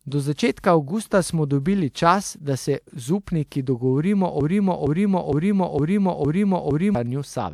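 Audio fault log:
0.60–0.64 s and 3.47–3.52 s, pre-echo: a short hiss of about 43 ms and 52 ms precedes each sharp attack, as transform-codec block noise spreads into the quiet before it.
4.41–6.95 s, broken-record loop: a 0.46 s fragment repeats exactly six times back to back, replacing the audio due there; a stalled player, encoder or stream is the likely cause.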